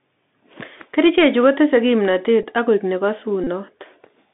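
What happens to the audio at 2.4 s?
At 2.43 s, just after "chu kotese kimnotet" and before "ak koik", a Bluetooth headset packet was repeated. About 7.5 ms of audio went missing, which fits two lost packets, and the headset decoded the previous packet's bits again in their place. That gives a brief buzz near 267 Hz until good packets return. Underneath, the Bluetooth CVSD headset codec limits the line to 200 Hz to 3.6 kHz, leaving scratchy sibilants and a granular hiss.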